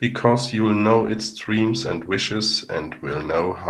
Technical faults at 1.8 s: call bitrate drop

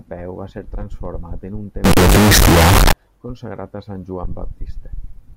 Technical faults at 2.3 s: signed and unsigned mixed up

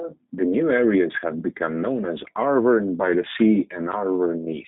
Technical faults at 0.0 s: G.729 codec

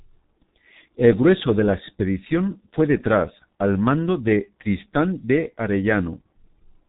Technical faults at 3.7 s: G.723.1 codec

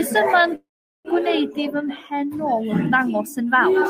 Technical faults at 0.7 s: call audio freeze

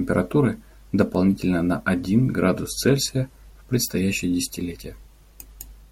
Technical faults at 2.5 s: word clock ticks

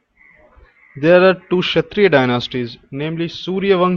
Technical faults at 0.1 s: none

